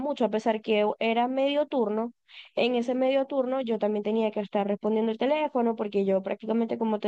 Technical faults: none

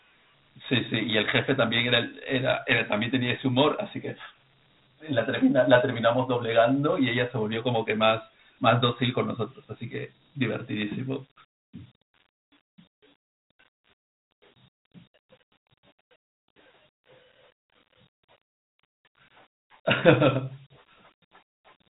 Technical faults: Dialogic VOX ADPCM

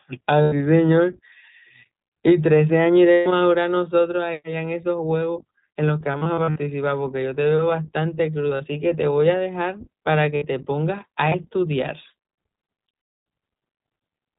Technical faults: iLBC codec; lost iLBC frames

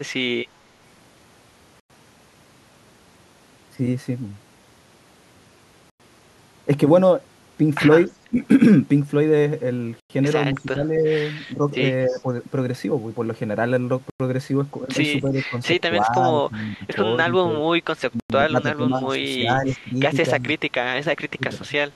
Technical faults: gap between chunks; echo leak; speech suppressed in double talk

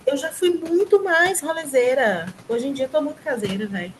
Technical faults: noise suppressor artifacts

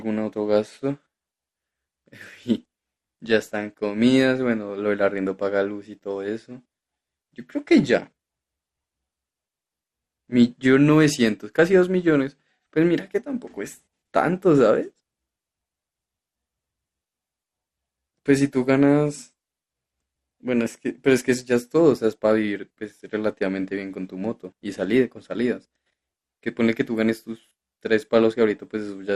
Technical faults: MP2 compression

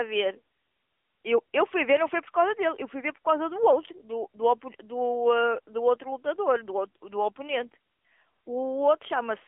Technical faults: AMR narrowband mobile codec; electrical switching spike

